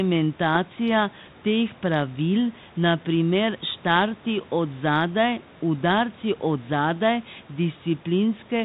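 No technical faults are audible.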